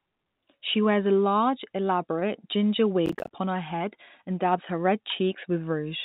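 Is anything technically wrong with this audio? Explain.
Yes. Processor overload crackle runs from 3.06 to 3.31 s, ending just before "her head and dabs". The system couldn't fill its short audio buffers in time, which fits buffers of about 10 ms, and roughly ten deadlines were missed in close succession. Each miss dropped in a hard-edged slice of silence, so the speech breaks into a quarter-second burst of gritty, tearing crackle that clears once the load eases. The call path's G.711 A-law coding, with nothing above 4 kHz, is audible as a narrowband telephone-like tone.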